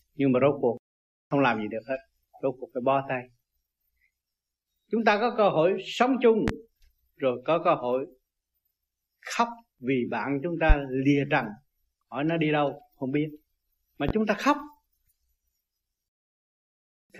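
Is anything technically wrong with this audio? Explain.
Yes. There are two loud pops, from 6.48 to 6.52 s and from 14.09 to 14.12 s. Each is a single sharp pulse of about 40 ms, peaking roughly 15 dB above the surrounding sound, which continues underneath. The likely cause is a sudden voltage step entering the signal chain, from a plug or switch contact, static discharge or a driver glitch. The downstream circuitry shapes it into a brief thump-like click.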